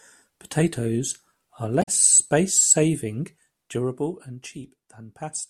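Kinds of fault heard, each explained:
Damaged data in a compressed stream: a brief garbled blip from 1.81 to 1.89 s, where the decoder trips over corrupt frames and loses sync.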